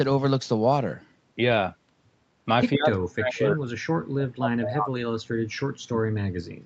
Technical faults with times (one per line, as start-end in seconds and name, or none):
2.75-3.66 speech suppressed in double talk
3.93-5.02 speech suppressed in double talk
5.34-6.65 speech suppressed in double talk